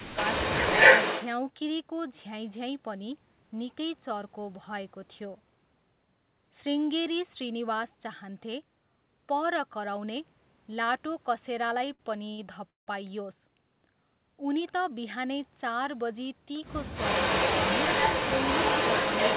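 Right from the start, 0 to 1.28 s, there's an echo leak: a faint copy of the speech trailing about 235 ms behind, sitting about 15 dB under it. The likely culprit is a far-end speakerphone whose echo canceller didn't catch everything its mic picked up and sent it back.

Inside that stretch, 0.11 to 0.18 s, the speech briefly ducks by about 10 dB for roughly 70 ms. That's speech suppressed in double talk: with both sides active, the canceller likely couldn't tell talker from echo and turned everything down.

At 11.94 s and again at 12.30 s you get a short stall from a late packet. The jitter buffer ran dry and the receiver held the last sound for 49 ms and then 85 ms, a smeared, slightly buzzy hold. Nothing is lost, and it just carries on.

At 12.70 to 12.89 s there's a call audio freeze: a 168 ms gap, about 150 ms of it silent, most likely from packets held up in transit. Playback then resumes where it stopped, so time is added but no speech is dropped.

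From 16.95 s to the end the echo leak comes back, now about 322 ms late and only about 5 dB under the speech, so it's much easier to hear. Like everything else in this band-limited call, it stops at 4 kHz.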